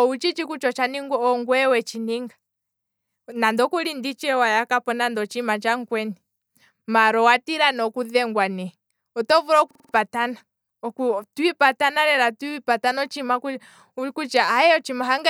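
At 9.71 s the speech locks into a system hang loop until 9.94 s: a single 46 ms slice of audio repeats exactly five times, which fits the sound hardware cycling a 2048-sample ring buffer while the system froze. It comes across as a rapid stutter at about 21.5 Hz, and about a fifth of a second of speech is missing. A waveform shows identical repeated blocks, and a spectrogram shows vertical seams at even spacing.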